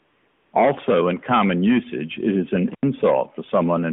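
From the very start to about 0.52 s you get AMR comfort noise. The phone decided nobody was talking and stopped sending speech frames, so the receiver fills that half-second with a smooth, steady synthetic hiss built from a rough level and spectrum estimate, then switches over to the real signal.

Around 2.70 to 2.83 s there's an intermittent contact, a loose plug or cable briefly opening for about 89 ms. The sound drops out with a crackle at each edge, leaving just faint hiss in the gap. Throughout, the narrowband AMR phone band holds everything to roughly 150 Hz to 3.5 kHz.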